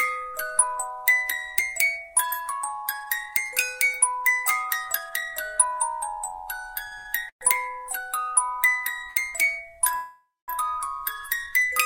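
At 6.87 to 6.94 s comes the first short stall from a late packet. A packet missed its slot and the jitter buffer ran dry. The receiver held the last sound for about 43 ms, then picked up from the same point. A second stall follows at 6.98 to 7.07 s, held for about 75 ms. Each one sounds like a brief smear with a slight buzz or dip. Nothing is skipped.

From 7.29 to 7.43 s there is a call audio freeze. The sound stops moving and a fading buzz or hiss fills about 118 ms, ending in about 90 ms of silence. It then resumes exactly where it stopped. Packets held up in transit likely caused this.

At 9.11 to 9.18 s another short stall stretches the sound by about 48 ms.

From 9.96 to 10.50 s a longer call audio freeze fills about 522 ms. The held sound decays into about 210 ms of silence before playback continues. Each stall and freeze adds a gap and pushes the following sound later.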